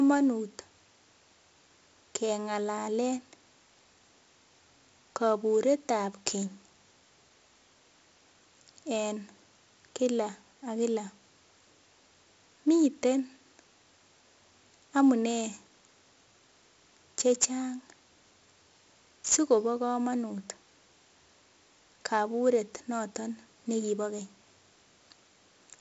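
Throughout the speech runs 4-bit ADPCM compression, with heavy damage. Each sample is coded as a coarse 4-bit step from a predicted value, and the step size adapts only gradually, so the error rides along with the signal as a gritty hiss on every loud syllable. Sharp onsets distort where the step lags behind. Nothing reaches above 7.7 kHz, which fits a 16 kHz sample rate near 64 kbps. On a spectrogram, a broadband noise haze swells and fades with the speech, cut off flat at 7.7 kHz.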